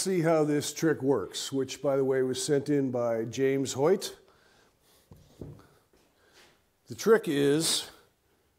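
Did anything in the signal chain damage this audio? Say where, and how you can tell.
No, nothing along the chain seems to have harmed this audio, and I can't hear anything that points to trouble at any stage.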